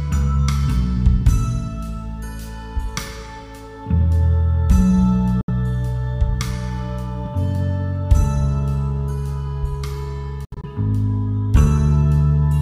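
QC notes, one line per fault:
5.41–5.50 s: Bluetooth dropout, likely. The sound cuts to silence for about 70 ms, then resumes further along, as if it had kept playing, which fits roughly three lost packets on the wireless link.
10.45–10.65 s: Bluetooth dropout, likely. About 116 ms of audio is missing, broken into gaps over a 186 ms stretch with the longest at about 70 ms, which gives a stuttering sound.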